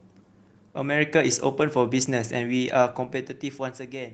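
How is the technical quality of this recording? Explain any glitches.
The recording has one clear glitch, a stretch of zipper noise. The speech also shows light coding texture consistent with Opus at a modest voice bitrate.

From 2.84 to 3.96 s, a level drop of roughly 15 dB happens in unsmoothed 2 dB steps, about seven per second. Each jump clicks, producing audible ticking.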